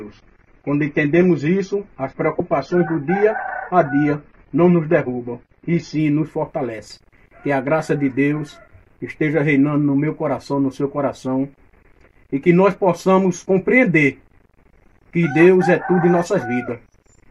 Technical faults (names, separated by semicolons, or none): adaptive stream starting at a low bitrate